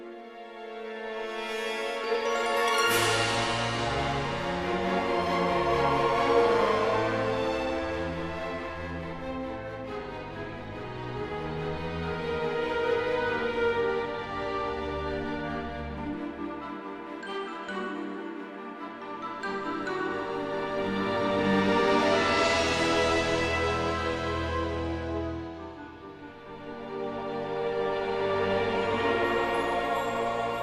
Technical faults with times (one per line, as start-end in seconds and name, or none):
none